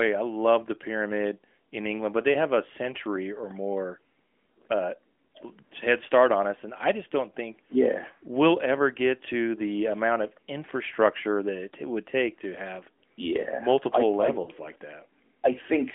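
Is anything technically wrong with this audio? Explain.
Yes, near the end, from 14.44 to 14.51 s, lost AMR speech frames interrupt the speech. Radio errors corrupted the coded frames, so the decoder discarded them and filled the gap by repeating the last good pitch and vocal-tract settings at falling gain. The gap of about 40 ms fits two lost 20 ms frames. It sounds like a brief smeared dip or warble, then the speech returns weak or rough for a moment. Through the AMR narrowband mobile codec the speech has a telephone bandwidth, roughly 250 Hz to 3.4 kHz.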